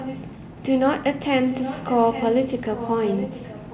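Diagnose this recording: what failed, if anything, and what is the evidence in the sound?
An echo leak in the call processing: a quieter, delayed copy of the voice trails the speech from 0.0 to 0.25 s, again from 1.47 to 2.32 s, and from 2.57 s to the end. It lags by about 0.81 s and sits roughly 10 dB under the direct voice. The likely cause is a far end on speakerphone whose echo canceller didn't fully subtract what its mic heard from the loudspeaker, so that residue got sent back down the line.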